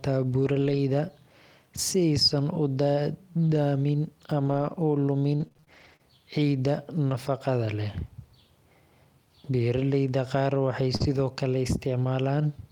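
Scattered short gaps run through this speech recording from 0.45 to 7.11 s: about seven brief dropouts, none longer than roughly 40 ms, totalling 160 ms lost. The receiver bridged each by extending the preceding sound, leaving small ticks and smears across roughly 3% of that span. Short concealed packet loss follows at 10.96 to 11.02 s, just after "qaar waxay": 40 ms went missing, and the decoder filled it by continuing the last sound before blending back, so it comes across as a quick wobble. Lost packets rebuilt from error correction overlap this at 11.00 to 11.18 s, where 100 ms of audio was reconstructed from the low-bitrate backup copies that Opus carries in each following packet. There is no silence there, but that stretch sounds grainier and noisier, which fits several 20 ms frames recovered this way.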